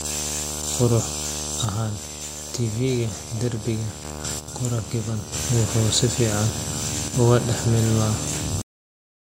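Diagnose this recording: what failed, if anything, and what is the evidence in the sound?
Analogue wiring: video or display buzz at 75 Hz runs throughout, fairly strong against the speech. The spectrogram shows steady horizontal lines at 75 Hz and its harmonics with hash above.

The level drops abruptly by about 6 dB at 1.65–4.05 s, 4.39–5.32 s and 7.08–7.14 s. The likely cause is one channel dropping out before the mono sum. The waveform envelope steps down and then back up.

Driver or buffer: a cut-off end at 8.62 s. The final buffers never played, so the sound stops mid-syllable and the waveform snaps to a flat digital-silence line with no decay.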